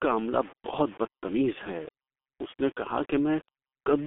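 Throughout the speech, the sample values were likely rounded to very few bits without dither, which fits a 6-bit signal. Grainy distortion, roughly 25 dB below the voice, follows every syllable. The whole clip also passed through the G.723.1 codec at a rate that fits about 6 kbit/s. It confines the speech to 250 Hz to 3.5 kHz with nothing above 3.8 kHz, leaving it heavily muffled, hoarse and smeared.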